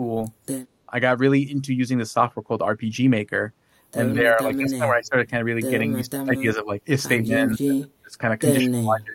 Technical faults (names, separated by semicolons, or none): speech suppressed in double talk